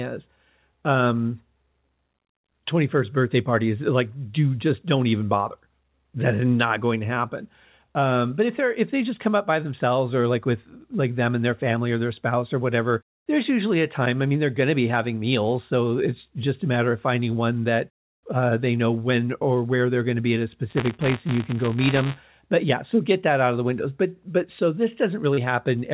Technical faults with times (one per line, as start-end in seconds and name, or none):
20.69-22.46 buffer tearing
25.34-25.39 short concealed packet loss